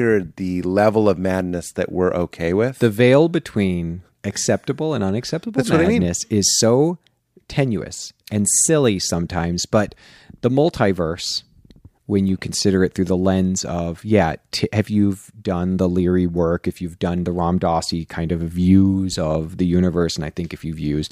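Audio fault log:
Nothing stood out on listening to this speech recording.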